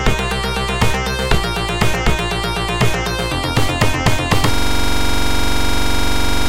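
At 4.54 s a system hang loop begins and runs to the end. The computer or its audio driver stopped supplying new data. The sound hardware kept replaying the same small ring buffer. One 42.67 ms slice of audio repeats exactly, some 46 times, which fits a 2048-sample buffer. The loop rate is 23.4 Hz. It sounds like a rapid, rough, mechanical stutter bordering on a low buzz. The sound never moves on.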